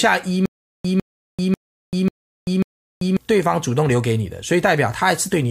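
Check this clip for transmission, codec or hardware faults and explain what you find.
One transmission fault is present. Stutter with silent gaps, 0.46 to 3.17 s: a likely playback stall replays the same 152 ms burst five times, each followed by about 390 ms of digital silence, every 542 ms.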